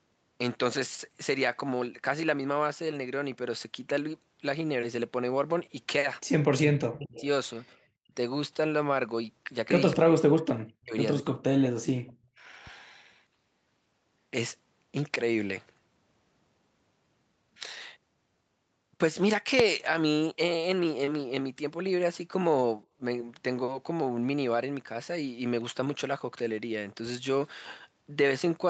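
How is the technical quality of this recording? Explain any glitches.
The recording has three kinds of glitches, clustered between 6 and 12 seconds, plus one loud click near 19.6 s. The speech is band-limited to about 8 kHz, which fits the Opus call path.

Echo leak at 6.43–6.48 s, 7.12–7.24 s and 10.59–10.63 s: a faint, delayed copy of the far side's voice comes back about 223 ms late, likely because a loudspeaker echo canceller let some of its microphone pickup through. The scraps sit well below the speech, roughly 20 to 35 dB down.

Speech suppressed in double talk at 6.56–7.25 s, 7.72–8.12 s and 9.94–12.4 s: the talker's voice dips or drops out in pieces, by as much as around 40 dB. This likely happened because the echo canceller could not tell the local talker from the returning echo while both sides spoke, so it turned both down.

Invalid numbers at full scale at 19.6 s: a processing step produced invalid values for a very short block, well under a millisecond, which fits a 32-sample block. 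The output jumped to one extreme value far beyond the speech peaks and back, heard as a single sharp bang.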